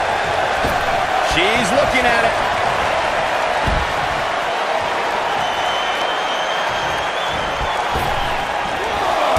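Regular clicks recur about every 1.05 s from 0.78 to 9.16 s, likely clock drift buffer slips: roughly 0.1% clock mismatch dropping or repeating small sample blocks.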